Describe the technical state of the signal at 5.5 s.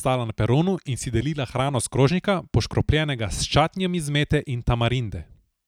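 At 5.5 s the speech signal is intact, with no audible fault at that moment.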